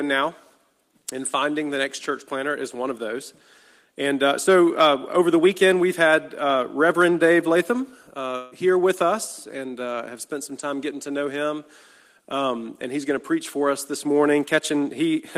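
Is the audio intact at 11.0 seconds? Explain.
Yes, at 11.0 seconds the audio is intact, with no dropout, click, distortion or other fault at that point.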